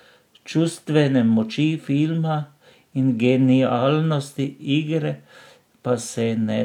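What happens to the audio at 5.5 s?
Nothing goes wrong at 5.5 s; the speech there plays through intact, with no dropout, click, distortion or other audible fault.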